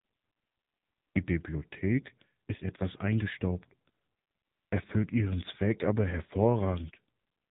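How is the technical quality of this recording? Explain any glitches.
Poor: the whole recording has passed through the AMR narrowband mobile codec at a low bit rate, which fits a 6.7 kbps mode. Its 8 kHz sampling drops everything above 3.8 kHz, and its vocal-tract model with sparse pulse excitation leaves muffled, telephone-band speech with heavy buzzy, synthetic coloration throughout.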